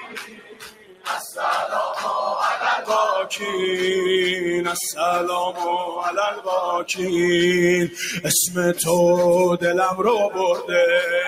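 A noise suppressor built for speech runs across the whole clip, treating steady parts of the sound as noise. Gain swings by around 10 dB, so sustained material pumps and thins. On a waveform the envelope breathes unevenly, and on a spectrogram held energy and tails look patchy.

Sound is cut by the noise suppressor from 0.00 to 1.08 s, sinking about 16 dB. Shorter cuts follow at 6.32–6.47 s (about 13 dB), 7.88–8.22 s (about 9 dB) and 10.55–10.73 s (about 9 dB). These appear as sudden dips in the waveform and faded spectrogram bands.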